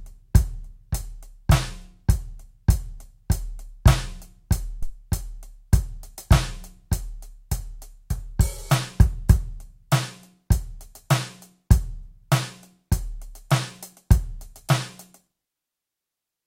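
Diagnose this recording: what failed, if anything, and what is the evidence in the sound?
A phantom power thump, at the analogue input stage, interrupts the music from 4.82 to 4.92 s. It is a deep, low-frequency thump peaking at about -14 dBFS, with its main energy dying away within roughly 22 ms and a brief tail out to about 4.92 s. The mechanism is a supply being switched on or off on the live input: the sudden DC step passes through the coupling capacitors and reaches the preamp as a single low-frequency transient.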